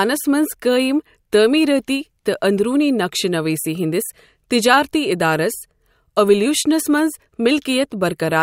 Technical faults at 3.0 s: none

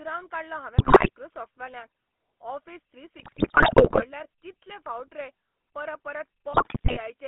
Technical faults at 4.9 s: GSM full-rate codec

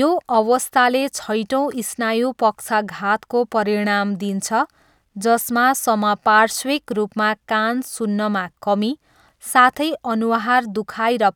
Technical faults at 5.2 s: none

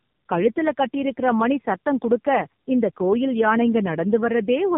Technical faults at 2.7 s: tandem speech coding

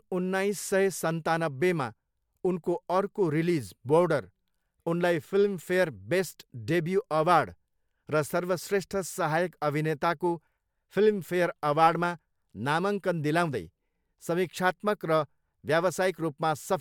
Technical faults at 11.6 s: none

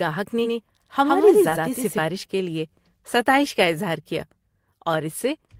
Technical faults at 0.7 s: doubled audio track

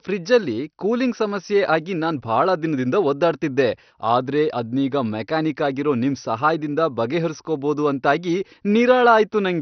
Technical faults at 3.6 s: MP2 compression

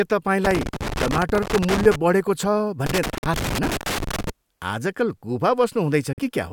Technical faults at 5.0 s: none

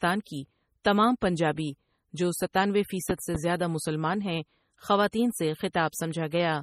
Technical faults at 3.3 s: MP3 compression; loud pop

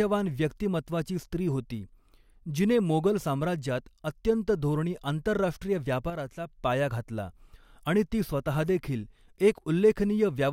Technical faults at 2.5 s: none

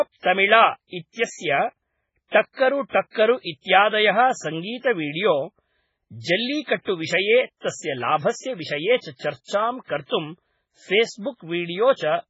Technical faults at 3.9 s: MP3 compression

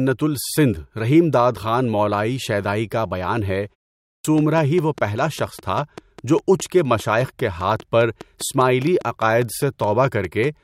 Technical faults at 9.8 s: train of clicks

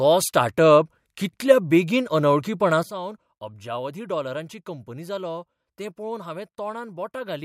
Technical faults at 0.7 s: none

